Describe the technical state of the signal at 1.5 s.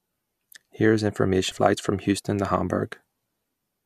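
Damaged data in a compressed stream sits right at that point, from 1.49 to 1.52 s, about 30 ms inside the speech. A short run of the encoded stream there is corrupt, so the decoder cannot read those frames properly, loses its lock on the frame structure and has to hunt for the next valid frame header before normal decoding resumes. That brief breakdown comes out as a chirp, squawk, click or short hole cutting across the speech.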